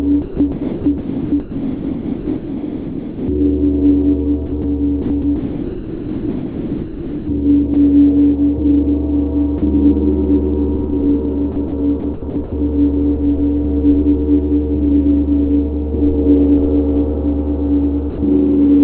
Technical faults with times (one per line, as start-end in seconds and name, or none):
0.22-3.28 sound chopped by the voice detector
4.46-4.64 sound chopped by the voice detector
5.02-7.28 sound chopped by the voice detector
7.74 sound dropped by the voice detector
9.58-9.62 sound dropped by the voice detector
11.52-11.72 sound chopped by the voice detector
12.00-12.52 sound chopped by the voice detector
18.10-18.18 sound dropped by the voice detector